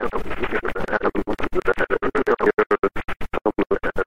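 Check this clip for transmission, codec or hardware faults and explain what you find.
One hardware-type fault is present, a train of clicks from 0.88 to 2.72 s. Around ten similar pulses arrive unevenly, averaging about 4.4 per second and peaking a few decibels above the sound. They are likely caused by electrical interference or a faulty connection or power supply. They are heard as irregular ticking, with thin vertical lines on a spectrogram and sharp spikes on the waveform.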